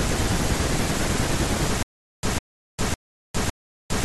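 Stutter with silent gaps begins at 1.83 s and lasts to the end of the speech. A burst of about 150 ms plays, then about 406 ms of dead digital silence, and the same burst returns, repeating four times on a steady 557 ms cycle. The likely cause is a stalled player or stream that replays its last buffered fragment on each retry and then runs dry, so the speech that should fill those gaps never arrives.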